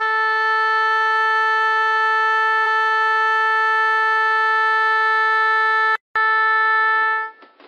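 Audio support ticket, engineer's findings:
Stream segment repeated, 2.62–3.61 s: about 0.98 s of the music replays after a small blip at the jump back. The waveform shows the same block twice, a duplicated queued segment.

Input switched to a poorer device, 5.96 s to end: a 200 ms gap, then dull, boxy music with unchanged level. The spectrogram shows a hard ceiling at 5.6 kHz and a new noise floor roughly 35 dB down. Likely a mic or headset swap.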